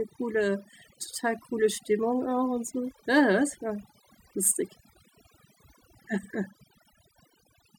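From start to finish there's overdone noise removal: the reducer was pushed too hard, knocking individual frequency bands right down whenever they sat near its noise estimate. Quieter parts of the voice got swallowed too, so gaps fall to near silence with twinkly specks.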